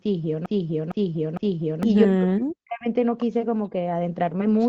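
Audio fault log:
0.00–1.83 s, broken-record loop: The clip opens mid-repeat, with the same 0.46 s fragment of speech replaying exactly and back to back three times, and whatever should have sounded then is gone. The likely cause is a stalled player or stream resending its last buffer.
2.05–2.87 s, speech suppressed in double talk: The talker dips, sinking by as much as about 40 dB over roughly 0.7 s in total. The likely cause is an echo canceller unable to separate the talker from the loudspeaker echo of simultaneous far-end speech and attenuating both.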